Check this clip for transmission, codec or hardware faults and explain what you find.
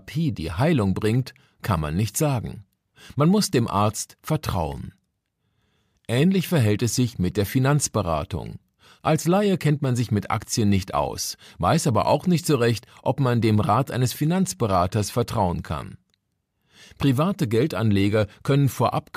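No transmission, codec or hardware faults can be heard anywhere in the speech.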